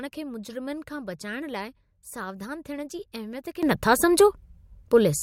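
At 3.63 s the speech abruptly gets louder, by about 15 dB, and the background noise rises with it in the same instant, staying at that higher level until the clip ends at 5.22 s. This is a sudden gain jump. Because voice and noise step up together, with no gradual swell, the cause is likely a digital gain setting or bit shift applied from one sample to the next without any ramp to smooth the transition.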